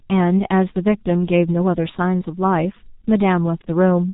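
Speech runs through the G.723.1 codec throughout, heavily damaged. Nothing passes above 3.8 kHz, so it sounds muffled and hoarse, consonants smeared, fitting a bitrate near 6.3 kbit/s.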